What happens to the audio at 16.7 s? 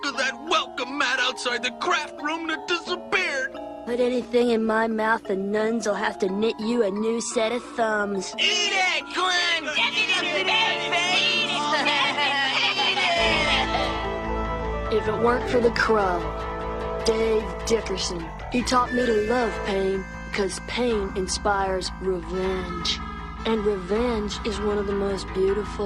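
At 16.7 s the clip is inside a call bitrate drop running from 15.19 to 20.91 s. The encoder was given far fewer bits, which fits a fall from 64 to 13 kbps, so it codes coarsely and trims high frequencies, leaving the sound rough, watery or muffled until it clears at 20.91 s.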